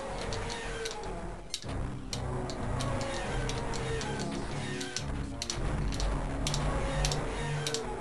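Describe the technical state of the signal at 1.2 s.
At 1.2 s the signal is intact, with no audible fault at that point.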